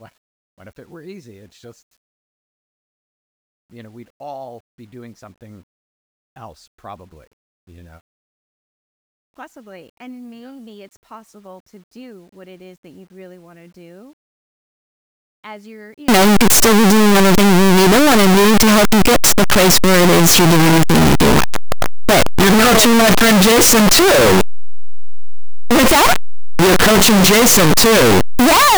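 From 16.08 s to the end, the speech collapses into very loud, harsh distortion, likely from signed and unsigned mixed up in the 8-bit samples. Flipping the top bit turns every zero crossing into a full-range jump, so soft sounds come out as loud as strong ones, and the spectrogram shows dense broadband energy.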